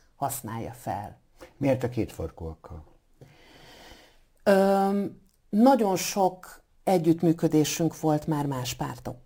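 Imaging from sample-and-hold upsampling runs through the whole speech clip. Each sample was just repeated with no smoothing, which fits an original rate near 22 kHz. Mirrored copies sit between about 11 and 22 kHz, about 23 dB down: a bright metallic fizz tracking the speech, its lowest copy moving against the pitch.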